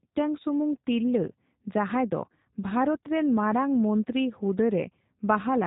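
Throughout, the speech carries plainly audible G.729 codec damage, sounding rough and synthetic as it's rebuilt from sparse pulses at about 8 kbit/s. The spectrogram shows nothing above 3.8 kHz.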